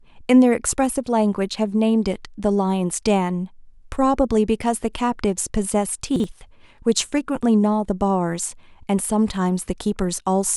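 Chunks out of order at 6.16 to 6.24 s: one 40 ms chunk of the speech arrives a single chunk late and plays after the chunk that should follow it. Nothing is missing, but the swapped pair leaves three hard joins, heard as a brief jumbled moment.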